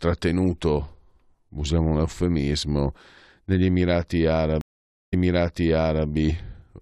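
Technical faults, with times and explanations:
4.61 to 6.07 s, stream reconnect: 0.5 s of silence, then the speech jumps back 0.97 s and repeats as the reconnected player decodes the server's resent burst afresh.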